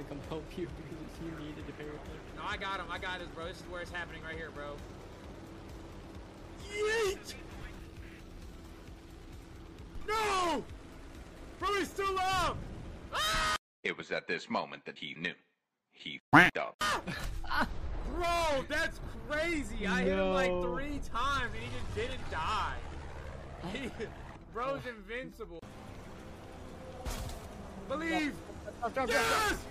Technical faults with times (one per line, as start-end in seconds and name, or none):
16.79 pre-echo